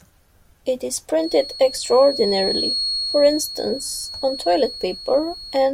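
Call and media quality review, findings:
Feedback whistle from 1.15 s to end of clip. Thin steady tone at 4.3 kHz, roughly 10 dB under the speech, level swelling and fading slowly. Likely speaker-to-mic acoustic loop held just at the feedback point, so one frequency rings without building up.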